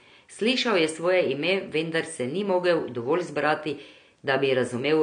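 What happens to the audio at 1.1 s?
AAC compression is the likely cause at 1.1 s and throughout. Low-bitrate encoding, fitting about 32 kbps, removes everything above 9.8 kHz and quantises coarsely, making the speech dull, smeared and fizzy.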